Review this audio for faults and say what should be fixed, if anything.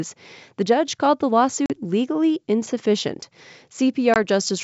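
Packet loss on an ADPCM call cuts hard-edged silent holes at 1.66–1.73 s, about two packets, and 4.14–4.17 s, about one. The decoder's predictor and step size lose track. The sound resumes slightly distorted. Fix this with packet loss concealment that also resets the ADPCM state.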